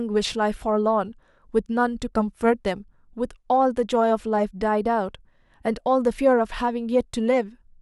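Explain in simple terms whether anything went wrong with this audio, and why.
Nothing went wrong here; the recording has no faults.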